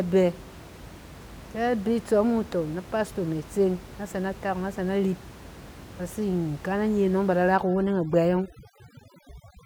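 From about 7.57 s right through to the end of the clip, you can hear overdone noise removal kick in. The noise reduction is clearly set too hard: any frequency band sitting close to its noise estimate gets pushed way down or switched off, and the softer parts of the speech get dragged under along with it. The room noise, which sat roughly 19 dB below the speech before this, drops away and breaks up into little twinkling specks.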